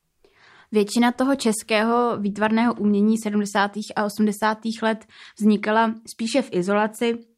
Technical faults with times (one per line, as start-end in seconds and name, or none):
none